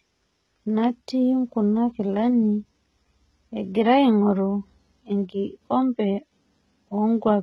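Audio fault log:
Throughout: HE-AAC compression, with heavy damage, likely from a very low bitrate of around 16 kbps. Nothing is left above 11.7 kHz. The treble that remains below that sounds false. Only the lower band seems to be properly coded. The upper band is rebuilt by copying lower content upward and shaping it loosely. Its harmonics do not line up with the ones beneath. So s sounds come out gritty, metallic and lispy.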